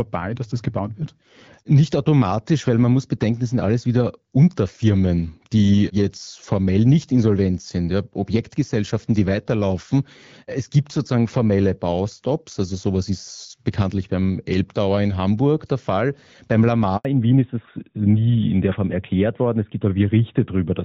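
Speech recorded over a phone call. At 16.97 s a handover gap of 80 ms silences the voice while the call switches networks, showing as a flat waveform and a blank vertical strip on a spectrogram. From 17.05 s to the end, a fallback to narrowband removes everything above 4 kHz, leaving a hard horizontal ceiling on the spectrogram where the earlier HD Voice band reached higher, consistent with a drop from AMR-WB around 12.65 kbit/s to AMR-NB near 12.2 kbit/s.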